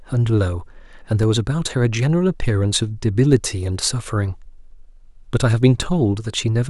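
Speech, interrupted by three DC steps at 1.23 s, 3.33 s and 5.82 s. At each one the waveform's zero line jumps suddenly. The first two steps are about -17 dBFS and the third about -15 dBFS. Each jump lands as a low thump or click. The offset then drains away smoothly, as a 20 Hz high-pass would do. The speech carries on unchanged underneath each thump.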